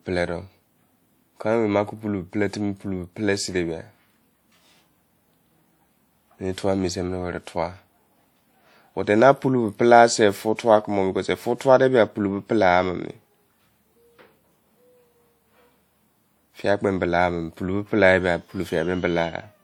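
Throughout the speech, the audio carries artefacts of an earlier encode that a clean high-bitrate file should not have. The likely cause is low-bitrate audio saved at a high bitrate: a compact earlier encode, consistent with roughly 64 kbit/s, was re-encoded as a larger MP3, which cannot restore what the first codec discarded. On a spectrogram, nothing appears above about 20.1 kHz, while the first encode's artefacts remain embedded below that line.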